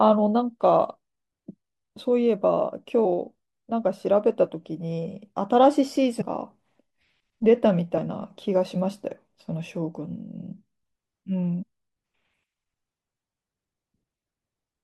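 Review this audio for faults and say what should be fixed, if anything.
The speech jumps forward four times, each with a short smeared blip at the join rather than a sharp click: at 3.04 s, 6.2 s, 7.97–7.99 s and 11.61–11.63 s. These are compressed frames skipped. Whole 23.2 ms frames never reach the output, so the audio leaps ahead by about a tenth of a second, a fifth, a twentieth, and a tenth respectively. The overlap between neighbouring frames softens each join. Re-encode from an intact source and check the file, or the stream's error concealment and retransmission, so that damaged frames are neither lost nor rejected.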